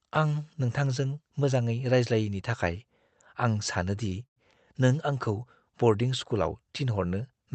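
Right after "आं सानो दि", at 4.09 to 4.14 s, there is a short stall from a late packet. A packet arrived after it was due, so the receiver held the last sound for about 21 ms, stretching it with a faint buzz or dip, and then carried on from the same point. Nothing is lost, only delayed.

A call audio freeze follows at 4.26 to 4.38 s, still just after "आं सानो दि". It is likely caused by packets held up in transit until the jitter buffer ran dry. Unlike the brief stretch before it, this pause is longer, about 108 ms. The continued sound fades quickly and leaves roughly 90 ms of silence, and then the audio resumes where it stopped, again with nothing missing. The audio went through an Opus call codec at 32 kbps and is limited to 8 kHz.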